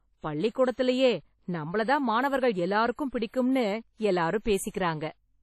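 All the way through, the speech has a ringing, washy quality with hiss that swells and fades along with the voice, and nothing comes through above 13.4 kHz. That's likely WMA compression, and the heavy damage fits a bitrate around 32 kbps, where long transform blocks smear quantisation noise and weak detail just drops out.

Then from 4.70 to 4.74 s there's pre-echo, a short hiss of about 43 ms creeping in just before a sharp attack, which lands soft and blurred. The codec spread noise meant for the loud onset back across the quiet moment ahead of it in the same block.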